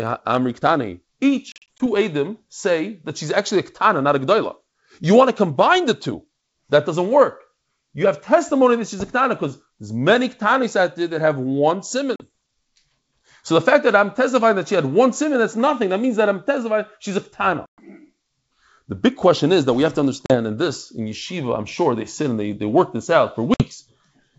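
Packet loss on an ADPCM call hits this speech clip at 1.52–1.81 s, 12.16–12.22 s (after "there that have one"), 17.66–17.80 s, 20.26–20.36 s (between "that we have to" and "and this in yeshiva") and 23.54–23.65 s (after "they work this out"). Missing packets leave hard-edged silent holes totalling 40 to 120 ms per event; in the first burst they are scattered over about 280 ms in runs of up to 40 ms. Because the decoder's adaptive predictor and step size lose step with the sender's, speech resumes with some distortion before recovering over the G.722 wideband link.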